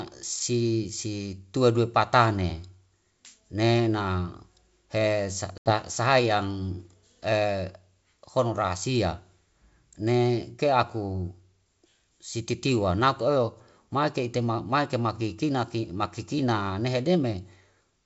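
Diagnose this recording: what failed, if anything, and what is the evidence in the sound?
Network stage: packet loss on an ADPCM call, with about 80 ms of audio lost, likely a few packets, between 5.58 and 5.74 s. The waveform shows a flat, hard-edged gap and the spectrogram a clean vertical blank. Afterwards the decoder's predictor and step size disagree with the sender's, so the G.722 speech returns slightly distorted before settling.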